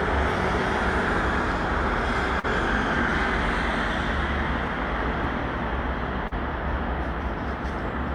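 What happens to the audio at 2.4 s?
At 2.39 to 2.46 s there is a short concealed packet loss. About 40 ms of audio never reached the decoder in time, so the receiver filled the gap by extending the preceding sound and then blending back into the real signal. It is heard as a brief smear or wobble. On a spectrogram, the band looks stretched and slightly blurred. The waveform shows a continued, smoothly faded segment rather than silence.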